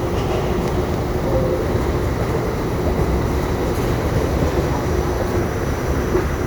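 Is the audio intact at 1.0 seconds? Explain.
Yes, at 1.0 seconds the audio is intact, with no audible fault at that moment.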